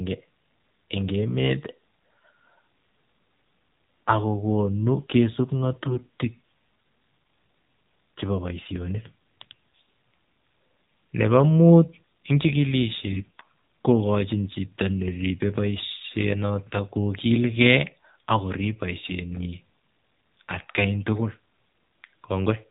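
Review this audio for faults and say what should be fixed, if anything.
The whole call passed through the AMR narrowband mobile codec at a low mode. The thin, buzzy texture fits about 7.4 kbps. Sampling at 8 kHz removes everything above 4 kHz, and so few bits leave the vocal-tract model's pulse excitation too coarse to hide, so the speech sounds muffled, synthetic and robotic for all of it. Fix: carry the call over a wideband codec such as AMR-WB, or at least a higher AMR-NB mode.

AMR bit errors struck twice. A weak radio link flipped the lightly protected bits in a run of frames, while the checksum on the core bits still passed. From 5.83 to 6.06 s, just after "akokonu kisub", a span that fits about a dozen 20 ms frames, the speech turns hoarse, scratchy and gargly while its pitch and level hold. The same happens from 13.12 to 13.45 s, just before "kokochin chito", across roughly eighteen frames, with an error density of around seven percent. 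Fix: improve the link margin or use stronger channel coding.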